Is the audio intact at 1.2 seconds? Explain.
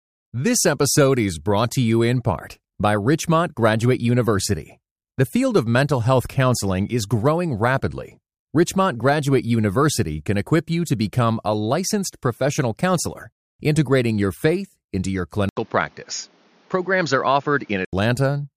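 Yes, at 1.2 s the speech plays through with no dropout, click, distortion or other fault to be heard.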